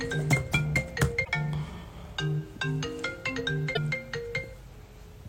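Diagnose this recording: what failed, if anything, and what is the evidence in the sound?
Damaged data in a compressed stream, at the codec stage: brief glitches at 1.21–1.29 s and 3.71–3.77 s, where the decoder misreads corrupted frames and resynchronises on the next header.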